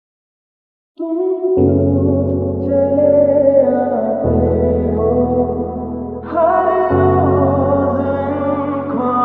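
No dropouts, clipping, glitches or level faults turn up anywhere in the audio, so there is nothing technical to flag.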